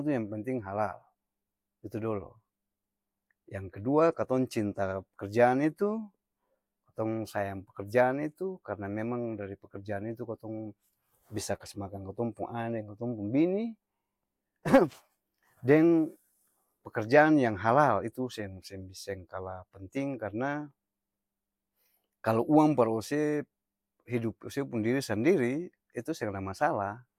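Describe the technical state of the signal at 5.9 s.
At 5.9 s the speech signal is intact, with no audible fault at that moment.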